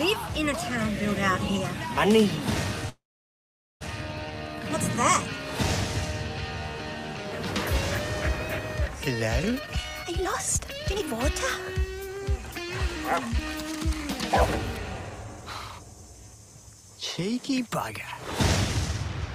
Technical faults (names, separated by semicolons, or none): call audio freeze; jitter buffer speed-up